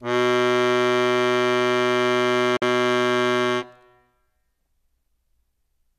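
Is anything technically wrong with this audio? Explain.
Yes. At 2.57 s the music suffers a digital broadcast dropout lasting to 2.62 s. The receiver muted after corrupt frames, fading out in about 3 ms, with two frames lost. Unlike a tape dropout's dull dip, the music falls to true silence, then resumes further along.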